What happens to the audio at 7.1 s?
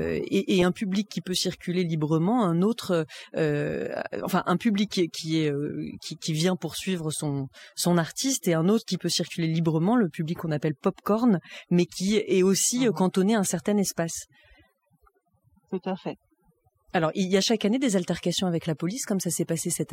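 At 7.1 s the speech is affected by overdone noise removal, which runs through the whole clip. Bands near the noise estimate are pushed down hard, taking quiet speech detail with them, and the background drops to near silence with twinkling specks. A spectrogram shows blank gaps scattered with isolated bright dots.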